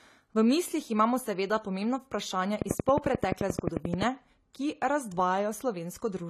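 The clip is speech carrying audible AAC compression damage throughout. Nothing is present above 14 kHz, and the remaining spectrum sounds dull and smeared, with a warbling, fizzy texture on sibilants. This points to AAC-LC at a low rate, around 32 kbps. From 2.62 to 4.03 s a train of clicks sits over the speech: roughly fifteen near-identical pulses at a regular 11.4 per second, peaking about 15 dB above the signal. These are likely from electrical interference or a faulty connection or power supply.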